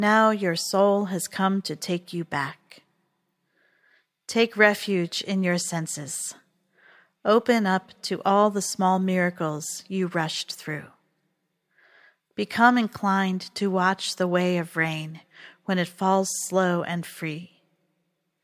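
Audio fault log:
Nothing to flag here: the speech comes across without any audible problems anywhere along the way.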